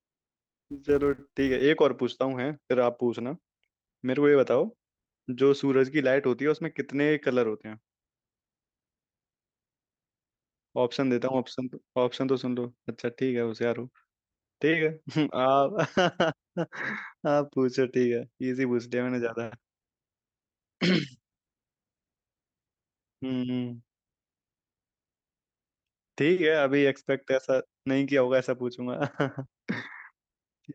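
A filter restarted on every block from 0.00 to 1.62 s: it drops its state and starts each block from silence, creating a small transient at each boundary. The result is a buzz at about 345 Hz, which fits a 128-sample block, rising and falling with the speech level.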